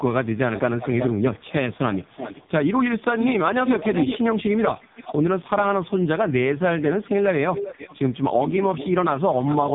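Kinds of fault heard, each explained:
AMR narrowband mobile codec: buzzy, synthetic-sounding speech with nothing above 3.8 kHz, pointing to a very low AMR-NB rate; plain band-limiting would keep the voice natural.
echo leak: a quieter copy trails the speech by 0.37 to 0.39 s, likely loudspeaker pickup an echo canceller missed; unlike reverb, it is a distinct repeat.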